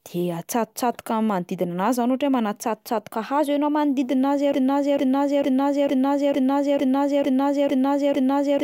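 A drift correction step runs from 2.64 to 4.08 s: the speech suddenly plays about 5.3% fast and roughly 90 cents sharp, close to a semitone, then snaps back. A clock-matching stage likely jumped the playback rate to rebalance its buffer.

A broken-record loop starts at 4.54 s and lasts to the end: a 0.45 s fragment repeats exactly, back to back, and the speech that should follow never arrives. The player or stream likely stalled and kept resending its last held piece.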